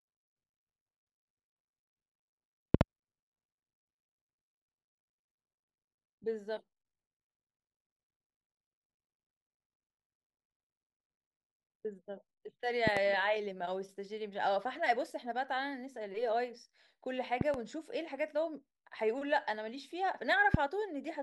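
Speech with loud pops breaking through at 2.74–2.83 s, 12.87–12.99 s and 17.41–17.56 s (each a double pop) and a single one at 20.54–20.57 s, roughly 20 dB or more above the voice, which continues underneath. They are likely voltage pulses from a plug, switch or static. Each shows as a tall vertical spike in the waveform and a full-height broadband stripe on a spectrogram.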